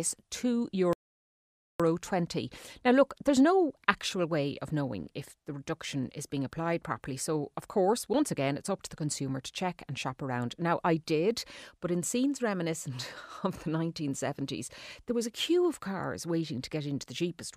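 Speech that drops to silence from 0.93 to 1.80 s, then resumes exactly where it stopped: a rebuffering stall, the player starving for data and adding 0.87 s.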